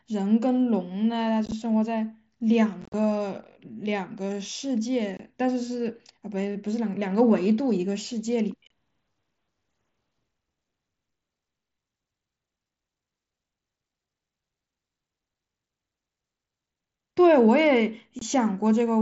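Speech carrying unconcealed Bluetooth headset packet loss: abrupt silent holes cut in at 1.46–1.52 s, 2.82–2.94 s, 5.17–5.20 s, 8.67–8.71 s and 18.19–18.22 s, each totalling 22 to 83 ms. Lost headset packets were left empty rather than filled, which sets this apart from concealed loss, where repeated or smeared sound would bridge the gaps. The wideband mSBC codec's 8 kHz band carries through.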